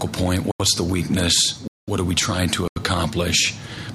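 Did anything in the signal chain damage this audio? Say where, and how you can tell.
Yes. The driver or buffer stage missed its deadlines, leaving blocks of digital silence at 0.51–0.60 s, 1.68–1.88 s and 2.68–2.76 s. Each hole drops hard to silence and back with no fade. The 85 ms gaps fit a 4096-sample buffer.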